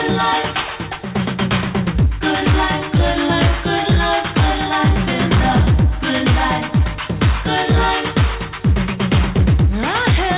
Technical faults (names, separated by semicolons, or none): hard clipping